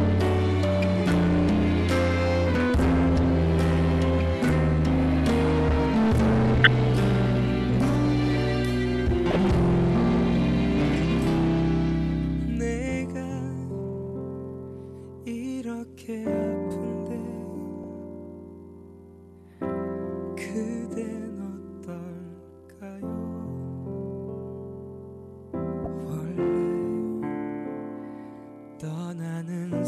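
From the start to 12.97 s, the signal drives a stage about 16 dB past what it can pass. That is hard clipping: the peaks are cut flat, and every loud moment turns into a harsh, buzzing fuzz.

Inside that stretch, at 6.64 to 6.67 s, a corrupt frame is decoded. Damaged compressed data across a few frames is played anyway, and it puts out a loud burst at the wrong frequencies, close to full scale. At 9.31 to 9.36 s, a second one gives a chirp about 10 dB quieter. At 17.84 to 17.88 s, a faint blip comes from the same decoding error.

At 19.64 to 19.70 s, a brief overload of about 2 dB clips a peak, leaving a small crackle. At 25.84 to 25.87 s, another corrupt frame squeaks at moderate level. Then, from 26.40 to 26.72 s, clipping of about 4 dB flattens peaks again, giving a short rasp.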